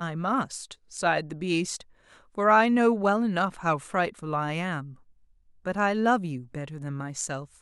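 No technical faults are audible anywhere in the speech.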